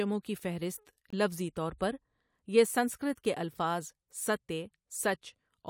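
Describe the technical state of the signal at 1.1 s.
At 1.1 s there is a corrupt frame muted, running from 1.10 to 1.14 s, just after "کی فہرست" and before "طور پر". Damaged bits made the decoder reject a compressed frame, and the player filled it with silence. The 36 ms hole, which fits a single lost frame, cuts in abruptly, and timing stays intact. On a waveform it is a sudden flat stretch of silence. A spectrogram shows a clean vertical blank band across all frequencies.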